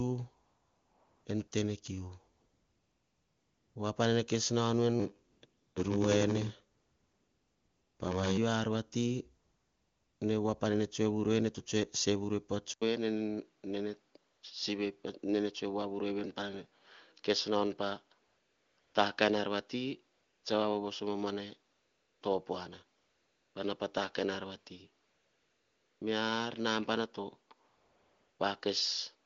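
AMR comfort noise first appears from 0.45 to 1.25 s, ending just before "en tenekiu", and recurs 14 times through 28.39 s, in gaps from 40 ms up to 1.4 s (the longest at 2.35 to 3.75 s). Each time, the phone treated the talker as silent and stopped sending speech frames. The receiver then filled the pause with synthetic noise built from a rough level and spectrum estimate. The real background gives way to a smooth, steady hiss that switches in and out.

Block size mismatch (padded) runs from 4.99 to 8.37 s, starting right after "kes nau nu en". The reading stage takes blocks that fit a 512-sample buffer, but the writing stage supplies fewer samples, and zeros fill the rest of each block. That tiny gap in every block produces a buzz at 93.8 Hz. The audio also plays at 0.861 times normal speed while its timbre stays about the same. Comfort-noise gaps at 5.31, 5.45 and 6.77 s fall inside this stretch. 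Another gap comes at 9.43 s, after "ar vati".

An input switched to a poorer device is the likely cause of the change at 12.74 s, which lasts to the end. An 80 ms silence marks the switch. After it, the narrower band makes the sound duller and boxier. The level drops by about 5 dB, and a new noise floor sits roughly 45 dB below the signal. Comfort-noise gaps continue through this section.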